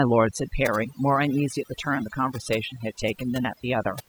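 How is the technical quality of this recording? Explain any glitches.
The recording is compromised by one fault running through its whole length. Throughout the speech, the background drops and breaks up into twinkling specks. This is overdone noise removal: set too aggressively, the reduction shuts down individual frequency bands close to its noise estimate, taking the softer parts of the voice away along with the noise.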